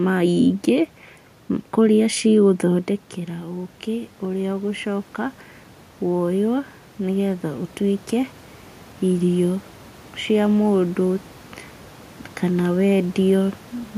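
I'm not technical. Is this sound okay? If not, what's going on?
No. From 3.26 to 5.45 seconds there is automatic gain rising: the system slowly turned its own volume up after the voice got quieter, so voice and background swell together.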